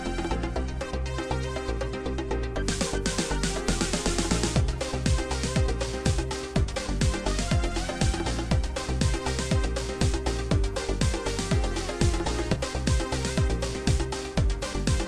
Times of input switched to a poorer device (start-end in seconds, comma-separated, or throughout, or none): none